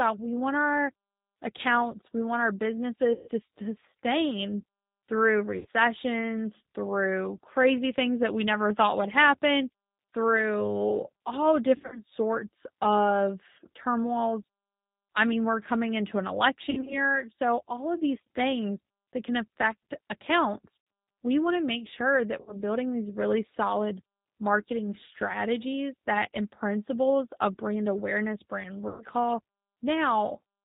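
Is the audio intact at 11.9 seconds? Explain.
No. From 11.76 to 11.99 s, just after "would happen through all", VoIP packet loss concealed by the speech codec means about 120 ms of audio went missing, in runs of up to 60 ms. The decoder extends its last pitch and filter into a buzzy tone or coloured noise that fades, and the voice stays weak or distorted as it recovers. Across this moment the 8 kbit/s G.729 codec also rebuilds the speech from a model that drops everything above 4 kHz, leaving it rough and synthetic.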